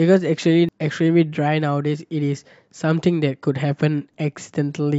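Damaged data in a compressed stream hits twice, at 0.69 s and again at 4.14 s. In each spot some bytes of the encoded speech arrive wrong, so the decoder cannot parse the frames there and loses its place until it finds the next valid frame header. Each event is very brief, heard as a chirp or blip that breaks through the speech for an instant before normal decoding resumes.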